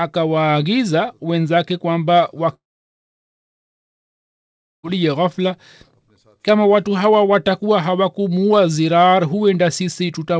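Speech carried over a call path whose G.722 coding leaves a clean ceiling at 8 kHz on the spectrogram, with a break from 2.54 to 4.92 s that sounds like a long network dropout, the likely cause being audio that never arrived. The last sound is stretched into a brief fading buzz, then about 2.2 s of near silence follows. The waveform collapses to a flat line and the spectrogram goes blank. Speech resumes with roughly 2.3 s of audio simply gone.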